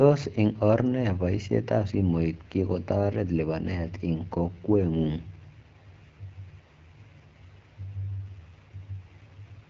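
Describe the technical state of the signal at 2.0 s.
At 2.0 s the speech is running through the AMR wideband (HD Voice) codec, as it does for the whole clip. It sounds rough and raspy, which fits one of the lowest rates, around 8.85 kbit/s. A pulse-driven vocal tract model rebuilds the voice up to 6.4 kHz, shaped noise stands in above that, and there's nothing past about 7.6 kHz.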